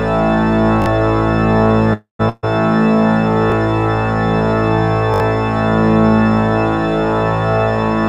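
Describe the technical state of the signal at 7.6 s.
At 7.6 s the signal is intact, with no audible dropout, distortion or other technical fault at that moment.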